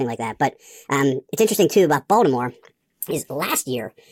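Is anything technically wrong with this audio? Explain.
Yes. The speech has a wrong sample rate fault throughout the clip. Everything runs 1.5 times too fast, and pitch rises by about 7.02 semitones along with it. That ratio fits audio captured at 32 kHz being played at 48 kHz with no resampling. Speed and pitch are tied to the same clock, so both shift by the same factor. Speech sounds high, thin and hurried, with a chipmunk-like quality and compressed timing.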